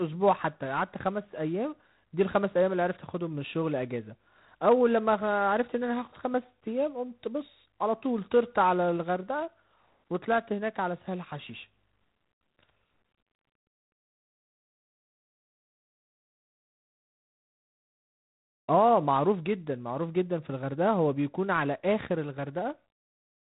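Throughout the speech, G.726 ADPCM coding leaves nothing above 3.9 kHz and adds a harsh, rasping hiss that rises and falls with the speech level, which fits 24 kbit/s. Steady background noise would stay constant through pauses instead.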